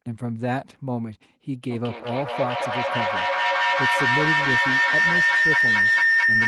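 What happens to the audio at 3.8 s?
At 3.8 s a shrill tone around 2 kHz rides over the speech, the loop coming round roughly every 200 ms, and peaking about 7 dB louder than the voice. This is feedback howl, running from 1.61 s to the end of the clip. A microphone and loudspeaker in the same room form a loop with more than unity gain, so each pass grows instead of fading and narrows onto the frequency the loop favours.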